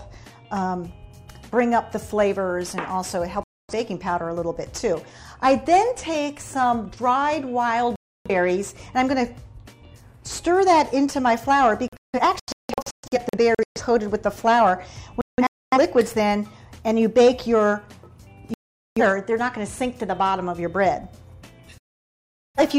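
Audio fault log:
3.44–3.73 s, 7.96–8.30 s, 11.88–13.81 s, 15.21–15.78 s, 18.54–19.01 s, 21.78–22.60 s: digital broadcast dropout. The receiver mutes on corrupted frames, leaving silent gaps that are blank columns on a spectrogram. The 11.88 s and 15.21 s events break into several short holes.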